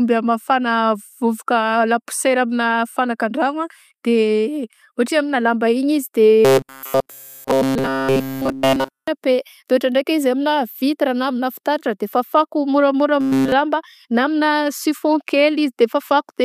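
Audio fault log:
6.45 to 9.08 s and 13.21 to 13.52 s (after "de fafako moramora"), robotic sound from repeated short buffers: speech becomes a metallic 134 Hz buzz with a fixed pitch, likely from a chunk of about 7.5 ms looping while late audio is skipped.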